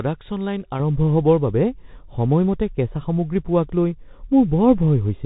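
Bluetooth CVSD headset codec, present throughout: the speech has been squeezed through the narrowband headset codec, which sends one up-or-down bit per sample with an adapting step size. Nothing above about 3.8 kHz remains, s sounds come out scratchy, and a granular hiss runs beneath the speech.

De-emphasis applied wrongly, from 0.80 s to the end: a treble cut meant to reverse pre-emphasis was applied to audio that had none, or was applied twice, so the response slopes smoothly downward, leaving 10 kHz about 11 dB below 1 kHz. The speech becomes dull and muffled.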